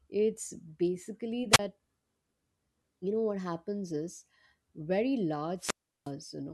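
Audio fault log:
1.51–1.59 s and 5.57–6.12 s, wireless microphone squelch dropout: right after "it's basically" the hiss swells, then a 33 ms hole of near silence, and later a longer 358 ms mute. The FM radio link faded far enough that the receiver's squelch shut the output until the signal recovered.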